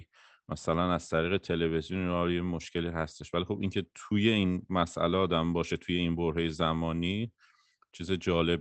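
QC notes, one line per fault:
No faults to log for this speech clip.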